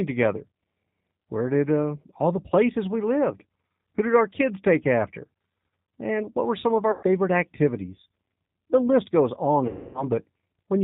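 Throughout, the speech passes through a G.729 codec, which fits its 8 kbit/s mode. Each 10 ms frame is rebuilt from a vocal tract filter, a pitch predictor and a few pulses, so nothing above 4 kHz survives and the voice sounds plainly rough and synthetic.

At 6.91 s, just after "what were some of", VoIP packets are lost and the speech codec conceals the loss for about 120 ms by extrapolating its last pitch and filter. The sound smears into a fading buzzy tone or coloured noise, and the speech stays weak as it resumes. At 9.67 s, after "list goes on", a longer 270 ms gap gets the same treatment. The stretched sound fades further before the speech comes back.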